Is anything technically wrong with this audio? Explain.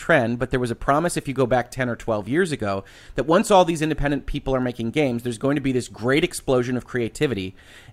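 Yes, there is one fault, a single click in the speech. Dropped samples, at 4.63 s: a brief run of samples, roughly a tenth of a millisecond's worth, is likely missing from the stream there, so the waveform leaps straight from one value to a later one instead of moving smoothly between them. The gap is far too short to remove any of the speech; the abrupt step is heard as one sharp click and appears as a thin vertical line across the spectrum.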